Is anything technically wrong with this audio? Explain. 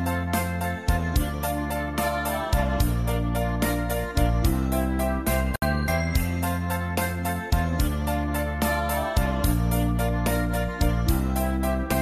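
Yes. There is a gap at a join of encoded pieces from 5.56 to 5.62 s. The audio appears to have been encoded in separate pieces, roughly 6 s each, and then joined without trimming. The encoder's start-up silence and the padding on the final frame both stayed in at the seam, leaving a hole of about 64 ms. The sound drops out with smeared edges, then resumes exactly where it stopped.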